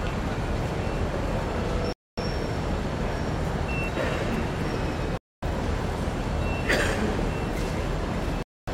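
Gaps between chunks occur at 1.93–2.18 s, 5.18–5.43 s and 8.43–8.68 s. These are 250 ms silences between 3 s chunks, recurring every 3.25 s, so the audio halts abruptly. The waveform shows flat lines with hard edges, and the spectrogram shows empty vertical bands.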